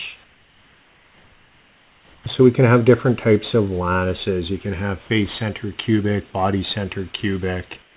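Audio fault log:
0.24–2.26 s and 7.82 s to the end, comfort noise in place of the background: the real room sound, already about 35 dB below the loud parts, turns into a flat, featureless hiss about 4 to 6 dB quieter. Likely discontinuous transmission, with the receiver generating stand-in noise while the sender goes quiet.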